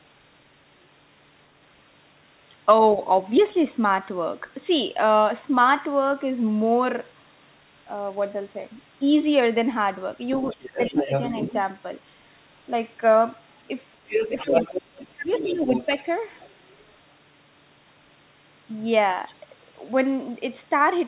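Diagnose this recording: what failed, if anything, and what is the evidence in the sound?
Speech suppressed in double talk, at the call-processing stage. From 10.36 to 11.11 s and from 13.97 to 15.88 s, the speech dips while a second voice is present, by around 10 dB and then around 20 dB. The waveform envelope shrinks in patches, and the spectrogram shows thinned bands. This is likely an echo canceller that turned both voices down.

Other side's voice leaking through, also at the call-processing stage. A fainter second voice runs from 10.42 to 11.6 s and from 14.07 to 16.5 s, sitting about 10 dB and then about 5 dB below the main speech. There are brief scraps at 12.33 to 12.37 s and 19.28 to 19.34 s. On the spectrogram these show as overlapping harmonic traces that are cut off, like everything else, at 4 kHz by the narrowband call path. The likely cause is loudspeaker echo that the canceller left in the microphone signal.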